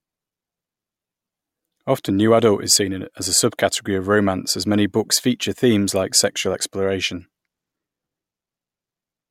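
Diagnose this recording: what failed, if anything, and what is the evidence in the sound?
No fault detected here.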